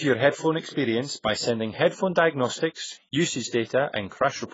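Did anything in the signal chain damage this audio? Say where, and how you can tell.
Yes, at the codec stage, throughout the speech: nothing sounds above 7.6 kHz, and sibilants fizz and warble. That is likely AAC compression at a low bitrate near 16 kbps, with the quantised bands breaking up. A plain low-pass filter would dull the top cleanly without that swirling texture.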